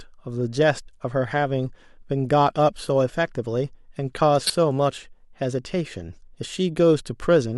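At 4.46 to 4.52 s the speech is hit by a corrupt frame decoded. Damaged bits in a few consecutive compressed frames were played anyway. Misread data throws energy into the wrong frequencies. It sounds like a brief, fairly loud chirpy burst, peaking around -10 dBFS.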